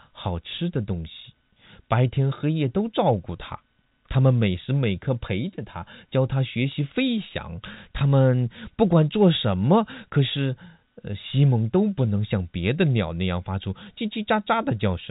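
No technical faults are present.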